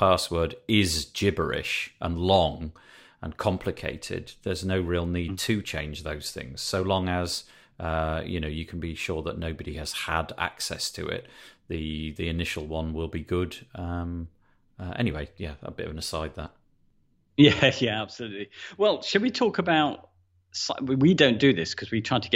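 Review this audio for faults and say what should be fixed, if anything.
No technical faults can be heard anywhere in this speech recording. Nothing needs to be fixed.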